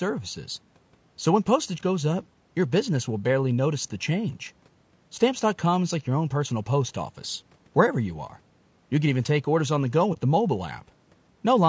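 Low-delay AAC compression runs throughout, plainly audible as rough, grainy speech with noise between harmonics, likely from AAC-ELD at a low rate fitting 32 kbps, band-limited to 8 kHz.

AAC frame loss with muting, 10.13 to 10.18 s: one frame's spectrum was zeroed, so the overlapping windows fade the speech out and back in, leaving a brief dip.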